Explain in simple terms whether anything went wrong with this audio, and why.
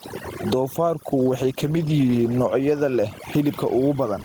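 The background sits in an unnatural near-silence broken by twinkling specks. That is overdone noise removal. A clean-up tool was set far too strong, so it switched off narrow slices of the sound whenever they came close to what it judged to be noise. The gentle room noise was quiet compared with the speech, but the tool stripped away the softer parts of the speech along with it.

The loud and soft moments also end up squashed close together. This is gain pumping. The likely cause is that the microphone was turned up far too high, with a fast limiter hauling the level down by a large amount on every loud sound and letting it rise again in the gaps.

From about 1.13 s to 2.41 s the speech turns rougher and more muffled, as if heard through a poor line, then clears again. This is a call bitrate drop. The call's connection estimate fell, so the encoder was told to describe the sound with far fewer bits. 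It coded more coarsely and trimmed away the higher frequencies. For about a second and a quarter it sat at its lowest quality before recovering.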